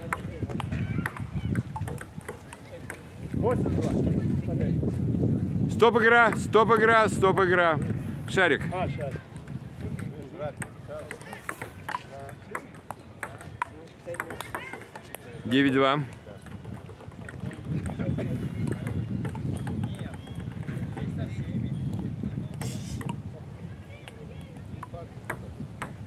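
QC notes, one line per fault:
10.07–10.09 s, skip ahead: playback jumps forward with no silence filling the join, and roughly 0.7 s of sound is gone. The two sides are spliced almost directly. Unlike a dropout or concealment, there is no gap or smeared fill, only an abrupt continuity break.
10.17–11.26 s, jitter buffer speed-up: right after the jump, the receiver trims short pitch-period pieces in rapid succession to drain surplus buffered audio, running at 111% speed and removing around 150 ms in total. Pitch stays unchanged, which separates it from resampling or a clock-rate error; it only sounds hurried.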